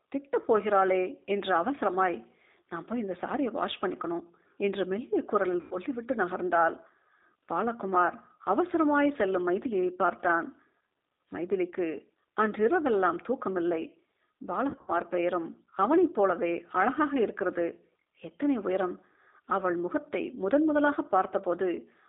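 G.729 codec damage runs throughout: this 8 kbit/s speech coder rebuilds each 10 ms frame from a vocal tract filter, a pitch predictor and a few pulses, so the speech sounds rough and slightly synthetic, confined to a narrow line band of roughly 250 Hz to 3.7 kHz.

VoIP packet loss concealed by the speech codec occurs at 5.61 to 5.76 s, where about 100 ms of audio went missing. It happens again at 14.70 to 14.93 s, with about 130 ms lost in gaps scattered over 180 ms, the longest lasting 70 ms. The decoder filled each gap by extrapolating its last pitch and filter at falling gain, so the speech smears into a fading buzzy tone or coloured noise. It stays weak or distorted for tens of milliseconds or more after the audio returns.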